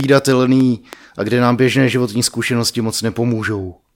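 From 0.00 to 0.94 s, before "a kde nám běžné", a train of clicks ticks unevenly at 4.31 per second, about five pulses standing roughly 10 dB above the speech. They appear as thin vertical lines across a spectrogram and sharp spikes on the waveform, likely from interference or a faulty connection or supply.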